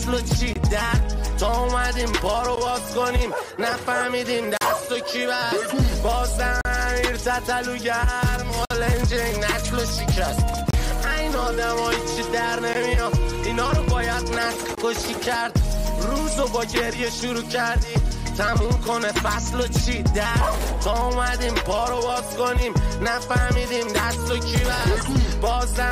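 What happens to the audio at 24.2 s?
Nothing goes wrong at 24.2 s; the audio plays through that moment intact, with no audible fault.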